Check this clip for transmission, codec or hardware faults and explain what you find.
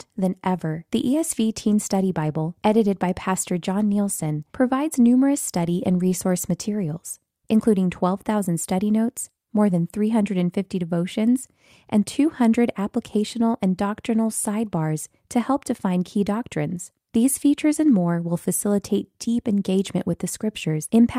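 No faults detected.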